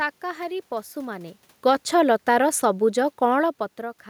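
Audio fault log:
1.54 to 3.6 s, automatic gain falling: the gain control judged the input too loud or its background noise too strong and lowered its gain by about 4 dB over two seconds. The room noise sinks along with the voice, unlike the talker's movements near 1 and 3.5 s.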